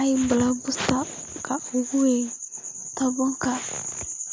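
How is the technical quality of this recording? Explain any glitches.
No glitches or technical faults can be heard in this speech recording. It has passed through a call's microphone processing, so the lowest bass is trimmed away and nothing reaches above 8 kHz, which is normal for that path.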